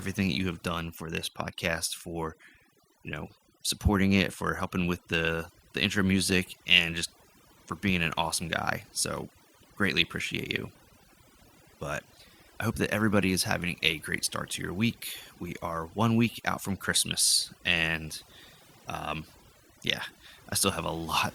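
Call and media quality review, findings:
Overdone noise removal, throughout the speech. Background drops and breaks up into twinkling specks between phrases. Noise suppressor set too aggressive: bands near its noise estimate are gated hard, taking quiet speech detail with them.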